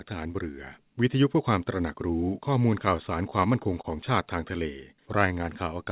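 From 2.97 to 3.85 s the speech hits repeated stalls (stutter). Packets arrived late or slower than playback, so the jitter buffer kept running dry, five times in that stretch. Each time the receiver stretched out the last bit of sound to cover the hole, about 69 ms in total, with the longest wait only 26 ms. Nothing actually drops out, but you hear the speech catch and hiccup in small jerks.

Then from 4.94 to 5.65 s there's a jitter buffer slow-down. The buffer was low or had just raised its target delay, so the receiver padded it by repeating single pitch periods and bits of the pauses over and over, adding about 64 ms. That section plays at roughly 92% speed with the pitch unchanged, so sounds come out drawn-out. The whole clip is narrowband, with nothing above 4 kHz, which fits a G.711 mu-law call path.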